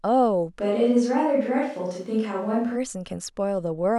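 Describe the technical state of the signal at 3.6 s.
At 3.6 s the signal is intact, with no audible fault at that moment.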